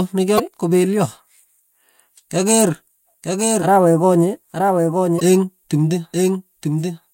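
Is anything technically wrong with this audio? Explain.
Yes. Damaged data in a compressed stream occurs twice, at 0.36 to 0.40 s and at 5.16 to 5.21 s. Corrupted bytes make the decoder misread those frames and lose sync until it finds the next valid frame header, so each spot is a short chirp or blip.

A doubled audio track begins abruptly at 3.22 s and continues to the end. The likely cause is a second capture path or an edit carrying the same speech about a second late, somewhat quieter. The result is a dry, full-band repeat with no room decay.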